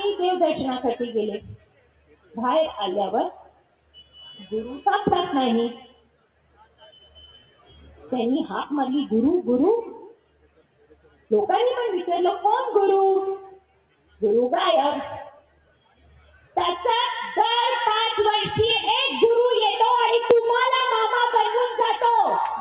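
A noise suppressor built for speech was applied to this music or sound material and stays active from start to finish. It treats sustained tones and decaying tails as noise and pulls them down by about 15 dB, so held material pumps and thins while attacks pass through. On a waveform the envelope breathes, and a spectrogram shows tails cut short. The band stops at 4 kHz, as expected for the G.711 call path.

Sound cut by the noise suppressor is heaviest at 1.40–2.37 s, 3.32–4.18 s, 5.80–8.12 s, 10.06–11.31 s, 13.49–14.22 s and 15.30–16.56 s. Here sustained sound sinks by up to about 18 dB, for roughly 0.7 to 1.5 seconds each time and about two seconds in the longest stretch. These spans appear as faded, hollowed patches on the spectrogram and as dips in the waveform.

Periodic USB or driver dropouts begin at 20.31 s and repeat every 0.50 s until the end. Each time, a little audio is skipped, so the signal jumps and a regular tick is heard. 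A waveform shows evenly spaced discontinuities, and a spectrogram shows thin vertical broadband lines.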